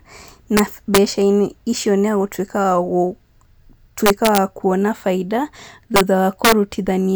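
Integer overflow cracks the speech at 0.57–0.60, 0.95–0.98, 4.06–4.38, 5.96–6.01 and 6.45–6.52 s. Peaks exceed the integer limit by about 1 to 3 dB, wrap to the opposite sign, and snap violently.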